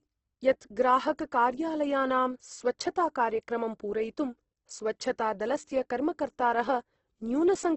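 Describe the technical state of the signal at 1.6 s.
The speech at 1.6 s carries heavy Opus compression, present across the whole clip. Nothing sounds above 8.1 kHz. The grainy, rough texture likely comes from the music mode filling starved bands with folded or noise content, which fits a bitrate near 12 kbps.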